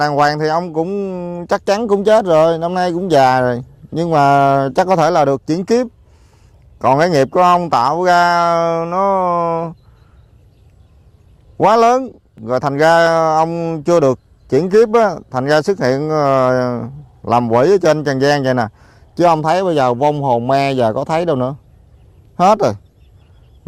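No technical faults can be heard anywhere in the audio; the signal stays steady and intact throughout.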